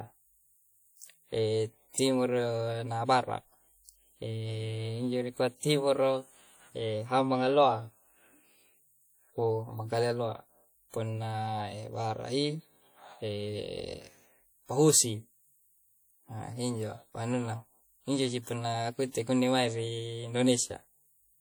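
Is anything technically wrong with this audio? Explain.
Yes. WMA compression, throughout: a transform codec, likely near 48 kbps, smears coarse quantisation noise over long blocks, leaving the speech ringing and washy with breathing hiss.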